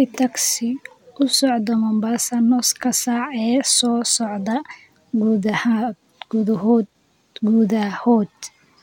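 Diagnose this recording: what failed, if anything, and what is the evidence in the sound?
Nothing in the speech stood out as a fault on listening.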